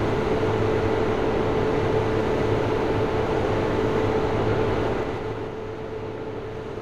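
From 4.81 to 5.54 s, a fast ticking rides on the sound as it gets quieter, a zipping texture rather than a clean fade. This is zipper noise. The level drops by roughly 10 dB, but instead of gliding down it falls in 2 dB steps, around seven a second, with no smoothing between them. Each abrupt jump in gain puts a small click into the waveform, and together these clicks form the zipper.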